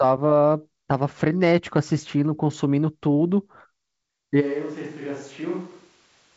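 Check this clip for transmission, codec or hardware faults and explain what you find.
One fault appears, near the end of this speech clip, above a G.722 wideband telephone path whose band stops just short of 7.7 kHz. At 4.42 s the sound abruptly turns roomy and hollow until the end, likely a switch to a distant microphone after the close one dropped out. The level falls about 10 dB, bass thins, and room noise rises to about 30 dB below the speech. A simple gain drop would not add room tone or lose low end.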